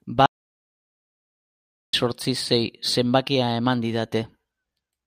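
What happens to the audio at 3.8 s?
Nothing goes wrong at 3.8 s; the speech carries straight through that point with no dropout, click or distortion.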